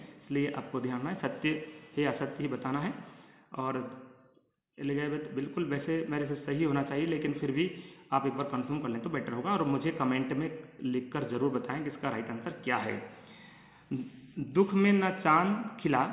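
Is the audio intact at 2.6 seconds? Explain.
Yes, at 2.6 seconds the audio is intact, with no dropout, click, distortion or other fault at that moment.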